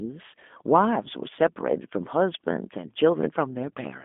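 Throughout, the speech carries G.729 codec damage: a line band of 200 Hz to 3.5 kHz, nothing above 3.7 kHz, and a rough, synthetic texture that fits an 8 kbit/s G.729A link.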